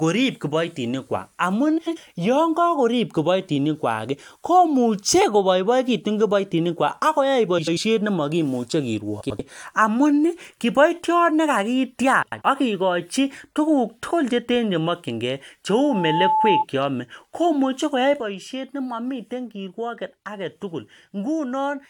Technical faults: frames out of order; loudspeaker feedback squeal; sudden gain jump

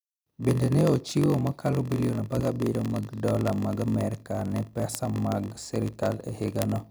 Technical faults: block size mismatch (padded); word clock ticks

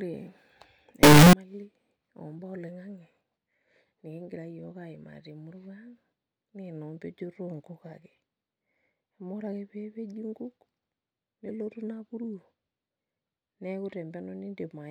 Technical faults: signed and unsigned mixed up

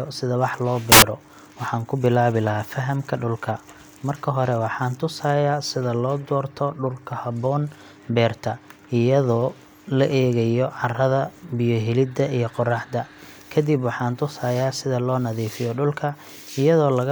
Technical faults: samples built from the wrong bytes

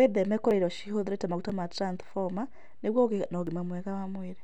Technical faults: audio missing between chunks

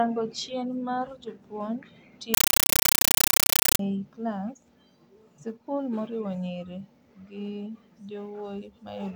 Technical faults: compressed stream played as audio

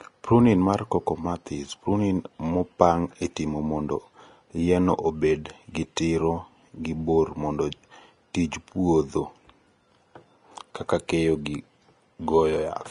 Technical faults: Vorbis compression; pre-echo

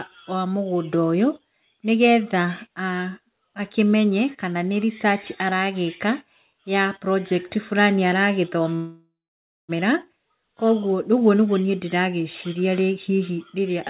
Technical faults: call audio freeze

